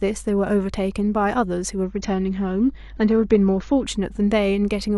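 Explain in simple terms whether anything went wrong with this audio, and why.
Two things went wrong in this speech clip.

First, there is mains hum all the way through. It is a steady low 50 Hz tone. It comes from the power supply leaking into the recording, probably through a ground loop or a nearby transformer. It sits clearly below the speech but never stops.

Second, from 1.84 to 3.84 seconds, the stream switched to a lower bitrate. The connection slowed, so a lower-quality version played. Everything above about 6.9 kHz disappears, so the voice turns dull. Then the quality suddenly returns, with no gap in the sound.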